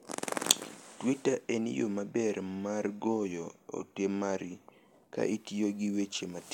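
A speech recording, and nothing is technically wrong with it.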